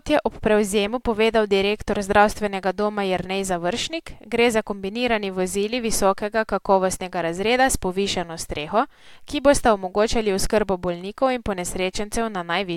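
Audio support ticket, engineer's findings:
Dropped buffer (overrun) at 10.46 s. Capture side likely failed to read its buffer before the hardware overwrote it; roughly 15 ms of audio discarded, both edges spliced directly. Symptom: small forward jump in the speech, no silent gap. Short enough that only a sliver of the sound is lost.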